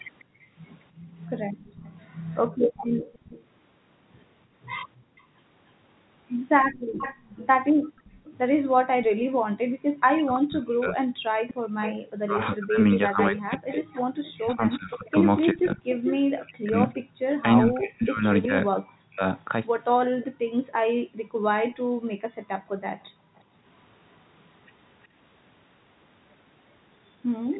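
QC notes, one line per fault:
0.19–8.30 s, 11.48–16.93 s and 20.21–25.06 s, echo leak: The far end is likely on a loudspeaker whose echo canceller let part of its microphone pickup pass back down the line. A delayed copy of the speech trails the original by 292 ms in the first stretch, 415 ms in the second and 364 ms in the third. It sits about 20 dB, about 10 dB and about 25 dB under the speech respectively.
0.24–11.65 s, 17.05–17.19 s and 20.38–23.64 s, background gated by the echo canceller: While the loudspeaker side was playing, its echo canceller clamped the microphone down to suppress echo. The room tone drops by up to about 40 dB and then returns once the canceller releases. This totals around 2 s in the first span, a single 0.14 s gap at 17.05 s, and around 1.5 s in the last span, heard as the background pumping in and out.
10.15–19.23 s, speech suppressed in double talk: Both ends were talking at once, and the canceller likely failed to tell its own talker apart from loudspeaker echo, so it attenuated everything. 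The talker's speech dips sharply, by as much as roughly 40 dB, thinning or breaking into fragments whenever the other side speaks. Around 5 s of this span is affected in total.
21.70–21.72 s, packet loss with pitch repetition: One 20 ms packet went missing, and the receiver concealed it by repeating the last pitch period instead of leaving a hole. Because the gap is this short, there is no fade to silence. It is heard as a brief held, slightly buzzy moment where the speech briefly freezes on one pitch cycle before normal audio resumes.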